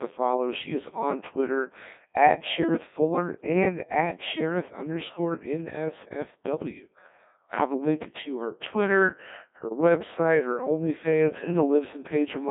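From the first second to the last, the speech has gone through a Codec 2 vocoder. Rather than keeping the waveform, the decoder rebuilds the voice from sine waves using only pitch, voicing, energy and a spectral outline. That's why it sounds so robotic and buzzy. The damage is heavy, which fits a very low rate of around 1.6 kbit/s. The band sits at roughly 150 Hz to 3.6 kHz, with nothing at all above 3.8 kHz.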